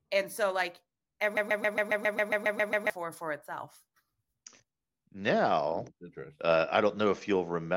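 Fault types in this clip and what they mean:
Broken-record loop: Right after "so like", at 1.37 s, the speech freezes into a fragment about 0.14 s long that repeats exactly, back to back, 11 times until 2.90 s, where playback resumes with "for itself". The identical repeats point to a stall in which the player, encoder or stream likely kept re-sending the last fragment it held. Whatever speech belonged in that roughly one-and-a-half-second stretch is missing.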